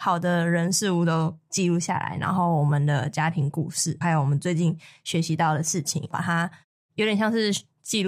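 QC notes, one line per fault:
7.58 to 7.62 s, AAC frame loss with concealment: a brief smeared, noisy patch of about 21 ms near the end of the speech, which points to a single lost AAC frame. The decoder filled the gap by reusing the last good spectrum with randomised phase, so the sound blurs instead of dropping out. On a spectrogram the harmonics smear into a short vertical band of diffuse energy. The waveform shows a small irregular stretch with no gap or decay to silence.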